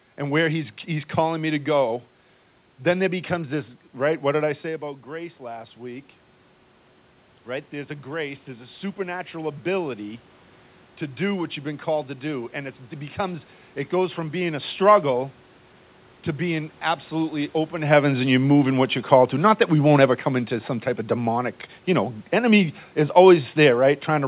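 From 7.47 s to 14.7 s you can hear the automatic gain rising. The level at the mic had dropped by about 11 dB, so the AGC decided things were too quiet and slowly pushed its gain up by about 6 dB over those seven seconds. Voice and room noise swell together, so the background creeps up along with the speech. The whole thing sits in a band that stops at 4 kHz, which fits a G.711 call path.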